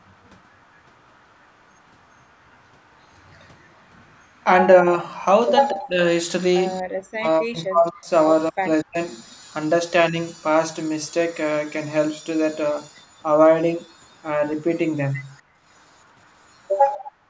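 From 0.14 to 5.71 s, an echo leak likely comes from a far-end echo canceller leaving residue: a faint copy of the speech returns about 227 ms late, very roughly 40 dB down. Between 4.82 and 8.99 s, the canceller likely confused double talk with echo and suppressed the speech, so the voice drops by up to roughly 40 dB in pieces totalling around one and a half seconds. At 6.83 to 6.87 s, the echo canceller gated the background, pulling the room sound down about 38 dB for a brief dip. From 12.94 to 16.7 s, the echo leak returns, likely from the same incomplete cancellation, with a faint copy trailing about 252 ms behind. From 15.42 s to the end, gating again cuts the background by about 38 dB, in dropouts adding up to roughly half a second.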